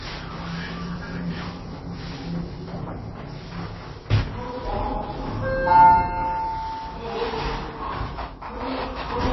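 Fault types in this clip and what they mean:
Low-bitrate audio saved at a high bitrate: nothing is heard above about 5.8 kHz for the whole clip, and the sound has the smeared texture of a very low-bitrate MP3 near 24 kbit/s. The cause is likely a later re-encode at roughly 186 kbit/s, which adds size but restores none of it, unlike a file simply encoded once at low bitrate.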